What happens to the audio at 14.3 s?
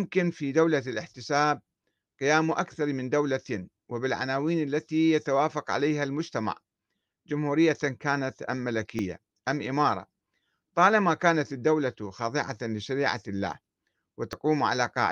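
At 14.33 s there is a dropped buffer (overrun): an abrupt jump forward in the speech. The likely cause is the recording software failing to collect its samples before the hardware overwrote them, so about 20 ms of audio vanished and the surrounding pieces were spliced together. What separates it from a dropout is the absence of any silent gap. The sound simply skips ahead.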